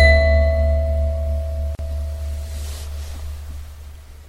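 Throughout the clip the sound is plainly degraded, with a watery, swirling quality, metallic chirps on bright, hissy parts and softened attacks. This is likely MP3 compression at a low rate, consistent with about 64 kbps. The encoder drops weak frequency lines that flicker on and off between frames. Broadband noise reduction would smear the noise floor instead.

From 1.75 to 1.79 s, a gap of about 40 ms cuts into the continuous sound. Its edges are smeared, so the truly silent part is shorter. This is a gap at a join of encoded pieces. Two separately encoded segments were spliced without trimming the encoder's start-up delay and end padding. Unlike a packet dropout, nothing is lost, and the sound resumes exactly where it stopped.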